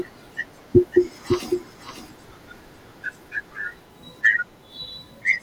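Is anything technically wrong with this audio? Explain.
Yes. From 0.92 to 3.08 s there is a doubled audio track, likely from the speech being captured a second time through a slower path. A full-band copy trails about half a second behind, roughly 5 dB quieter, with no room colour, and cuts in and out abruptly.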